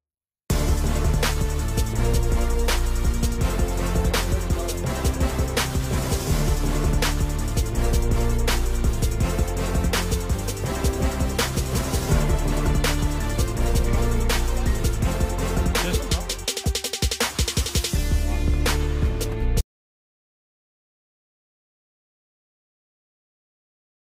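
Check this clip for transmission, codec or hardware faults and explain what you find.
There is one fault. An audio dropout to silence runs from 19.61 s to the end: the input was likely lost, leaving silence with no room tone, so the sound cuts off abruptly.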